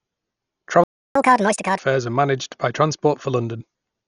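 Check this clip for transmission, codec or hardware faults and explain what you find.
Three faults are audible: heavy codec compression across the whole clip, and a playback stall followed by a sped-up catch-up near the start.

Dolby Digital compression, throughout: the encoder likely ran at a very low bitrate, around 48 kbps, so it cut the band and left many frequency lines without mantissa bits, which the decoder fills with dither noise. The speech sounds dull, with a rough, fluttering grain around tonal parts.

Playback stall, 0.84 to 1.15 s: the player likely ran out of data or had its thread blocked, so output stopped until it recovered. The speech cuts off mid-flow for about 0.32 s of silence, then resumes.

Catch-up at higher speed, 1.15 to 1.79 s: after the stall, the player resamples its backlog at 1.5 times normal speed to win back the lost time. Speech rushes and rises by roughly seven semitones before dropping back to normal rate and pitch.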